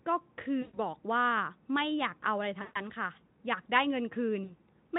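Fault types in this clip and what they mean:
VoIP packet loss concealed by the speech codec: three short dropouts, at 0.61–0.80 s, 2.61–2.82 s and 4.43–4.54 s, where the speech smears into a buzzy, stretched tone that fades and then sounds weak as it recovers. Gaps of roughly 120, 140 and 60 ms, consistent with several 20 ms frames lost each time, were filled by the Speex decoder repeating its last pitch and filter at falling gain.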